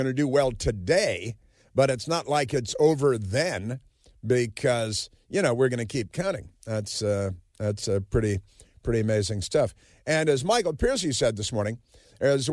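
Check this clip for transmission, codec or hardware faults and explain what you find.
No faults found; nothing in the speech needs flagging.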